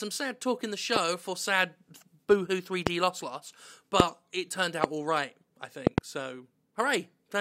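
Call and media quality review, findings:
Loud pops at 0.96, 2.87, 4.00, 4.84 s and a double pop at 5.87–6.00 s, about 20–25 dB above the speech. Likely voltage spikes from a plug, switch or static. Unlike a dropout, the speech continues underneath.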